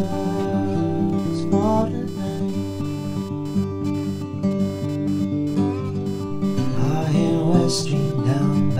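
A music recording runs through an interface whose ground is shared with a busy computer, so every load swing from the processor, graphics card or mouse shifts the audio reference and leaks into the signal. The result is computer activity noise for the whole clip: a buzzing, chirping texture pulsing at around 500 Hz, sitting roughly 25 dB under the music, rising and falling with the machine's workload rather than with anything in the performance.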